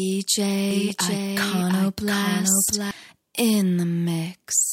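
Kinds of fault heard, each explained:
Doubled audio track: The same signal likely reached the mix twice, once directly and once through a slower path, so a second copy runs a fixed time behind the first. From 0.71 to 2.91 s, every sound is repeated roughly 0.7 s later, a few dB quieter than the original, full-band and dry with no decay or room colour. The copy starts and stops abruptly, giving hard, unnatural repeats rather than a natural echo.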